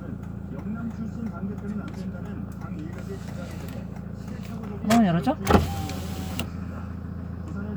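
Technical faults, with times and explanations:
No technical faults are audible at any point in this recording.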